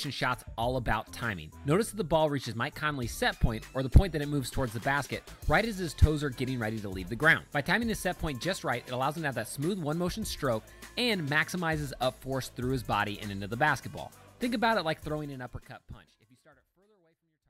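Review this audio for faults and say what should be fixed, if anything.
Nothing needs to be fixed, as there are no faults in this audio.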